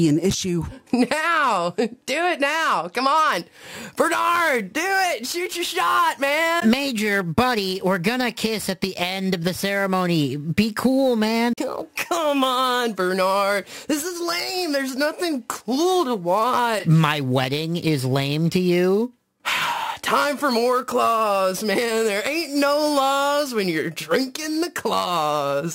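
From 3.32 s to the end, the audio carries sample clock jitter: a hiss-like roughness that swells on loud, bright passages and drops away in quiet ones. Timing errors of around 10 microseconds produce error roughly 20 dB below the signal.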